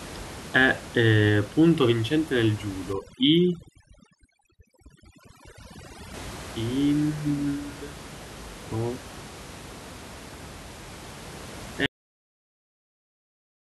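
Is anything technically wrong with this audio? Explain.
Yes, there are two faults in this speech recording.

From 2.93 to 6.14 s the background drops and breaks up into twinkling specks. This is overdone noise removal: the reducer, set far too hard, shuts off individual frequency bands close to its noise estimate and strips quiet parts of the voice with them.

At 11.86 s the audio has a cut-off end. It stops abruptly in the middle of a sound and falls straight to digital silence with no natural decay. The final buffers were never written or played out, so the recording ends early. The room noise, which sits about 18 dB below the speech, is part of the original recording.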